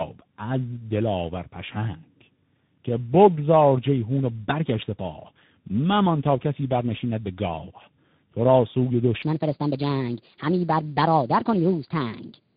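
Throughout, tandem speech coding is audible: the speech passed through two speech coders in sequence, with a G.711 link between them, which fits G.729A followed by CVSD. It sounds rough, warbly and muffled. From 9.23 s to the end at 12.57 s, a section plays at the wrong speed, 1.28 times too fast, which is likely a clock mismatch in playback or editing. The speech is hurried and about four semitones high.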